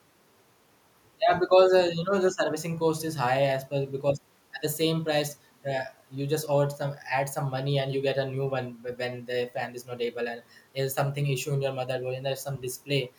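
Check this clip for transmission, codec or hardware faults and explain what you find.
Nothing to report: no fault is audible anywhere in the speech.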